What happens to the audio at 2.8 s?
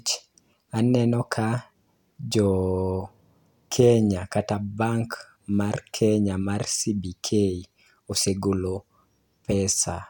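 Nothing goes wrong at 2.8 s: the speech continues intact through that moment with no audible fault.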